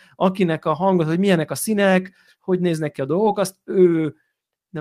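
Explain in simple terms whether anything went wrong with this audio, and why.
Two small hiccups: at 2.05 to 2.07 s and again at 3.25 to 3.27 s, the speech turns briefly rough and a little noisy. Each is a lost packet rebuilt from error correction. A tiny chunk of audio, about 20 ms, went missing in transit, which fits one dropped packet each time. The next packet carried a cruder backup copy, so the player used it instead of leaving a gap. You hear a grainy blip rather than silence.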